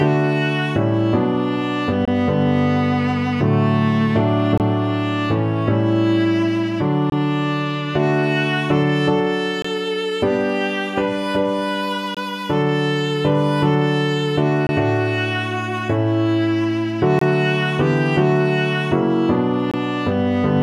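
A gap between chunks recurs eight times, at 2.05–2.08, 4.58–4.60, 7.10–7.12, 9.62–9.65, 12.15–12.17, 14.67–14.69, 17.19–17.21 and 19.71–19.74 s. The audio arrives in 2.5 s blocks, and about 23 ms of silence is inserted at each join, so the sound is interrupted rather than lost. Each one is heard as a brief, hard-edged dropout on a steady rhythm. A waveform shows flat-line notches with abrupt edges, and a spectrogram shows evenly spaced thin vertical blank stripes across all frequencies.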